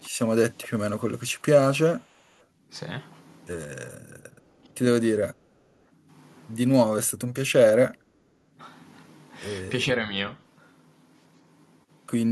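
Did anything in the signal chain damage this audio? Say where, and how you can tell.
Yes, the call processing damaged it. The echo canceller likely let an echo leak through: a very faint copy of the speech, 413 ms late, at 0.96–1.21 s and 2.1–2.45 s.

The same canceller gated the background, pulling the room sound down by about 11, 8 and 13 dB at 3.98–4.13 s, 4.3–4.35 s and 7.92–8.1 s.

The speech dips briefly at 4.63–4.68 s, 5.35–5.39 s and 9.88–10.38 s, by a few decibels up to about ten. This is likely speech suppressed in double talk, with both sides talking at once.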